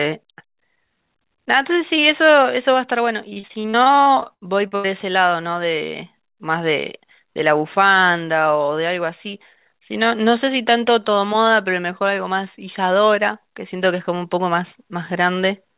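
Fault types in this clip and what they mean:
Repeated packet loss (robotic sound): choppy speech from 3.3 to 4.86 s, where fourteen gaps of up to 82 ms, about 30% of that stretch, were patched by extending the preceding sound.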